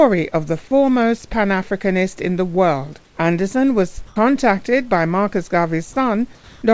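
Discontinuous transmission likely paused the stream, so the receiver substituted comfort noise in place of the background from 4.07 to 4.16 s, just before "contacted by", and from 6.35 to 6.62 s. Both gaps become flat, featureless hiss, shifting level by about 4 dB and about 3 dB.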